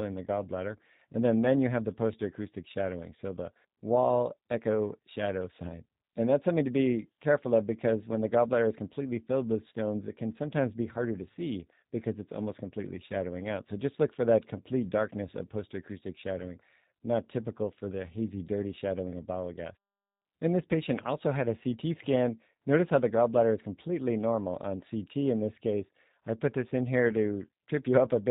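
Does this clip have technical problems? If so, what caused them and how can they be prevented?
Yes. The speech runs through the G.729 codec throughout. It sounds band-limited, with nothing above 4 kHz, and plainly rough and synthetic, which fits an 8 kbit/s VoIP stream. The codec rebuilds speech from a vocal tract model and a few pulses per frame. Use a wideband codec such as G.722 or Opus.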